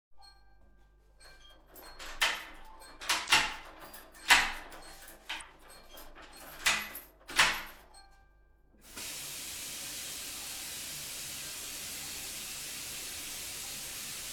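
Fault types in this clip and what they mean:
Damaged data in a compressed stream: part of the encoded data is corrupt, so the decoder misreads those frames, loses sync and searches for the next valid frame header. Here it causes two brief blips, at 3.26 to 3.30 s and at 5.37 to 5.42 s, each about 40 ms long. On a spectrogram each shows as a narrow vertical smear of broadband energy. On the waveform each is a short, abrupt burst or discontinuity.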